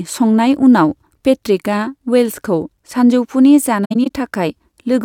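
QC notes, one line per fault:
3.85–4.11 s, AAC frame loss with muting: several short holes open in the speech across this span, adding up to 128 ms of silence, with the longest gap around 70 ms. This fits about six lost frames whose spectra the decoder zeroed, so the overlapping windows fade the sound down and back up rather than cutting it. On a spectrogram, full-band vertical blank stripes with softened edges; on the waveform, envelope dips tapering smoothly to zero.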